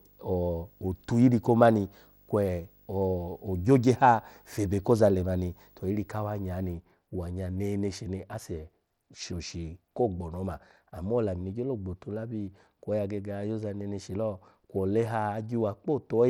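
From the start to 6.74 s there's a video or display buzz, a 50 Hz field-rate hum with hash over it and a 15.6 kHz line tone, sitting well under the speech. Right through the clip the treble is dull and flickery with a gritty edge, likely Bluetooth SBC compression, and it sounds like a starved bit pool around 96 kbps.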